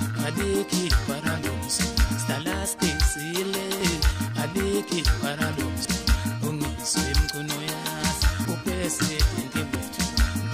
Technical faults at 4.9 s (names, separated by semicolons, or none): dropped buffer (overrun)